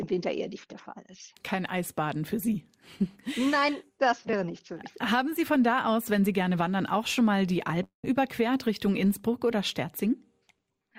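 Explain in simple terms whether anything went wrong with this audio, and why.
Around 7.83 to 8.05 s there's a long network dropout: the sound smears into a fading buzz, goes silent briefly, then jumps ahead, likely from lost packets.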